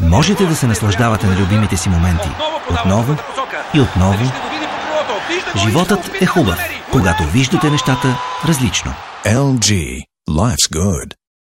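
From 1.15 to 10.54 s, about ten clicks recur every 1.17 s, likely clock drift buffer slips of a few dozen samples each. Their steady spacing distinguishes them from random dropouts.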